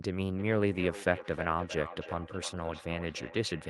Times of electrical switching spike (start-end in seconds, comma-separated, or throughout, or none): none